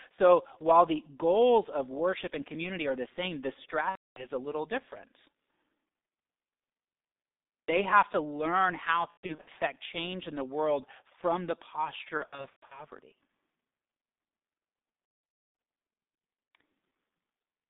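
G.723.1 codec damage runs throughout this speech recording: the band is squeezed to roughly 200 Hz to 3.7 kHz at about 6.3 kbit/s, and the slowly updated voice model makes the speech muffled and hoarse, with smeared consonants. VoIP packet loss concealed by the speech codec occurs at 3.89–4.29 s (after "are the same the", before "a little different"), 9.11–9.49 s (after "have to learn how", before "change in the world"), 12.17–12.84 s and 15.05–15.59 s, losing 270, 240, 330 and 480 ms of audio, with the last gap including an unbroken 270 ms run. In each gap the decoder repeats its last pitch and filter at falling gain, turning the speech into a fading buzzy tone or coloured noise, and the voice stays weak or distorted until it recovers.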